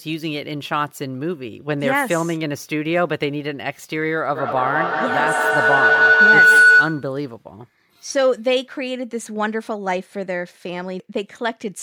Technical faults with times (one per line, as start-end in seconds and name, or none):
4.35-7.18 feedback howl